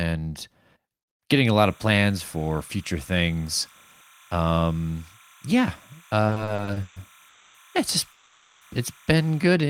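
From 1.58 s to 9.42 s, timecode bleed leaks a square wave alternating near 1 and 2 kHz, which fits 30-frame code, roughly 30 dB under the speech. It is heard as a chirping warble and shows as steady paired spectrogram lines. Between 6.27 s and 6.98 s, repeated stalls (stutter) occur eight times, the longest 140 ms, as the receiver extends the last sound. The speech drags and stutters, and the waveform shows smeared, repeated stretches. At 7.28 s (260 ms) and 8.12 s (490 ms), call audio freezes hold a fading buzz, likely because packets were delayed. Each appears as a smooth, decaying band before the speech resumes intact.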